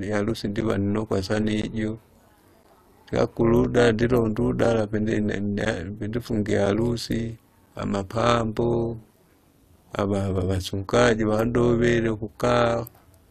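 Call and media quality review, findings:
Overlap-add ripple, whole clip: metallic, buzzy robotic sound with extra tones around the speech, level swinging about 11 dB at around 200 Hz. The frame resynthesis stage's window overlap doesn't sum flat. Waveform shows a periodic envelope; spectrogram shows sidebands spaced near 200 Hz.

Gap between stream segments, 1.62–1.64 s (19.3 ms) and 2.63 s (11.5 ms): hard-edged silent holes at about 1 s segment boundaries. Packetiser/player timestamp mismatch filled with silence, no audio lost. Waveform shows flat near-silent runs; spectrogram shows full-band vertical blank stripes.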